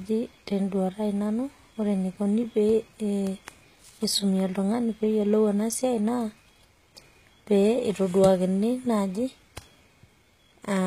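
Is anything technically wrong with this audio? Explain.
Yes, the speech has plainly audible HE-AAC compression throughout, likely from a low bitrate around 20 kbps. The treble is rebuilt from copied lower bands, so s sounds come out gritty and metallic, with nothing above 14.9 kHz.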